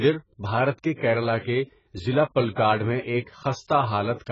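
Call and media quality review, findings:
AAC compression, throughout. Speech dull and smeared, warbling and fizzy on sibilants, nothing above 7.6 kHz. Likely a low-bitrate AAC-LC encoder: lowered band cut-off, spectral holes or substituted noise in coarsely quantised frames. Heavy damage fits roughly 12 kbps.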